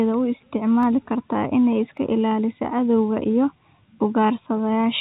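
At 0.83 s a single sharp click cuts through the speech. A second click follows at 1.97 s. Each shows as a thin vertical line across the spectrum, which is band-limited to 4 kHz by the narrowband call codec, likely G.711 A-law. The likely cause is dropped samples. A fraction of a millisecond is missing from the stream, so the waveform jumps straight to a later value. Nothing audible is lost. Only the abrupt step is heard.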